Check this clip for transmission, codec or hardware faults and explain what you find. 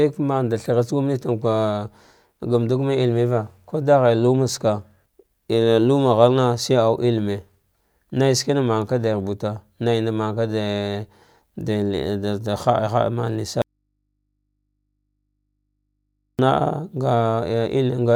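An audio dropout to a faint residue runs from 13.62 to 16.39 s, cutting out about 2.77 s of the speech. The likely cause is a break in the wanted signal while the path after it stayed live, leaving the open input to pick up mains hum. The speech vanishes abruptly rather than pausing or fading, and the gap holds only a low hum, around 55 dB below the speech, before the speech returns just as suddenly.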